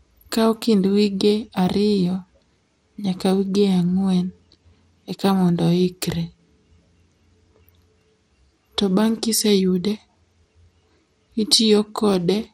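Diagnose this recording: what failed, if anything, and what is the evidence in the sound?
The codec stage is where this went wrong, and it runs the whole length of the speech. Everything above about 16.5 kHz is simply gone, so the top end sounds dull, and there's a plainly audible gurgling, granular texture riding on it. That points to MP2 compression, likely at a low rate around 80 kbps: the encoder runs short of bits, shuts off the upper sub-bands and coarsely quantises the ones it keeps, so they flicker and grind.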